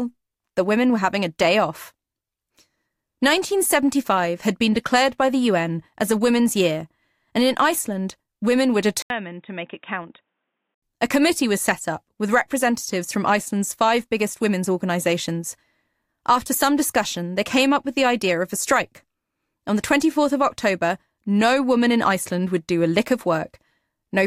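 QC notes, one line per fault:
9.02–10.82 s, input switched to a poorer device: after "women were", the input was likely moved to a narrower-band device. An 80 ms gap follows, then the speech stops above 3.8 kHz, turns dull and boxy, drops about 10 dB, and carries new noise roughly 50 dB down.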